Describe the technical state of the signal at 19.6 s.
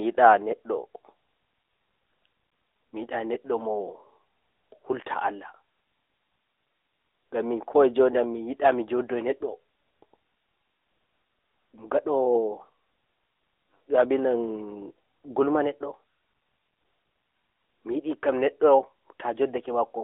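At 19.6 s, as throughout, the AMR narrowband mobile codec rebuilds speech from a pulse-driven vocal-tract model, giving a buzzy, synthetic tone consistent with roughly 10 kbps. A spectrogram shows nothing outside 300 Hz to 3.6 kHz.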